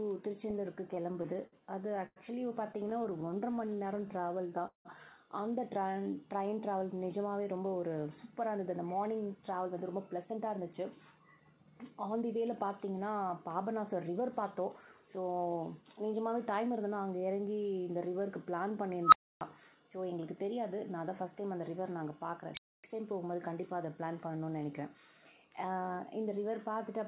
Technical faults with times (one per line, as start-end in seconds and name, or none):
0.95-2.19 repeated stalls (stutter)
2.73-4.13 repeated stalls (stutter)
3.40-4.59 jitter buffer slow-down
4.67-4.88 call audio freeze
5.79-6.62 jitter buffer slow-down
8.41-15.57 jitter buffer speed-up
19.03-19.41 unstable filter
22.41-22.84 unstable filter